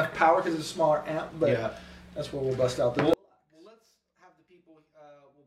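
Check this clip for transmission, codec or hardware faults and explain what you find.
One fault is present. Audio dropout to a faint residue from 3.14 s to the end: the wanted signal was likely lost while the path stayed live, so the sound cuts abruptly to a faint leak roughly 35 dB down.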